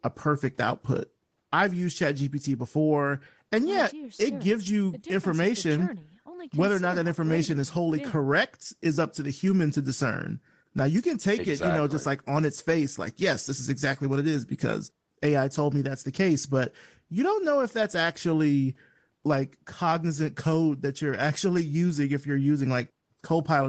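No technical faults can be heard anywhere in the speech. It has passed through a call's microphone processing, so the lowest bass is trimmed away and nothing reaches above 8 kHz, which is normal for that path.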